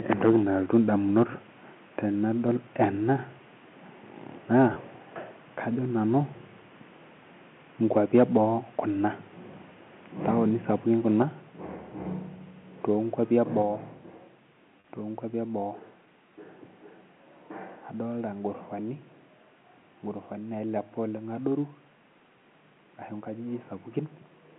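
Between 0.12 and 0.36 s, 1.18 and 1.23 s, 2.81 and 2.84 s, and 7.96 and 8.37 s, the loudest syllables carry a harsh, crackly edge: microphone overload, most likely from an input level set too high, driving peaks roughly 2 to 4 dB past the converter's ceiling. On a waveform the peaks appear sliced flat, and in the burst near 1.2 s a noticeably larger share of samples was clipped. A spectrogram shows faint vertical smears of added high-frequency energy at each clipped moment.

At 4.74 to 4.76 s there is packet loss with pitch repetition. About 20 ms of audio went missing, which fits a single lost packet. The receiver filled the gap by looping the last pitch cycle, so it sounds like a brief held buzz. The waveform shows a few identical repeated periods, and the spectrogram shows the harmonics frozen as flat horizontal lines for that instant.

At 11.22 s and again at 13.62 s, the microphone volume is stepped down by about 4 dB each time, likely the call software reacting to the earlier overloads. 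Voice and background both drop together and abruptly, with no fade. The waveform envelope shrinks in a clean step, and the spectrogram darkens uniformly across all frequencies at that point.

At 14.80 to 14.84 s, just before "tonkuapi eboo", a second packet loss with pitch repetition bridges about 40 ms, consistent with two lost packets. Here the repetition runs longer and decays audibly before the speech resumes through a short cross-fade. On a spectrogram the frozen harmonics fade out, then the normal pattern returns. Throughout, the telephone band stays limited to roughly 150 Hz to 3.5 kHz.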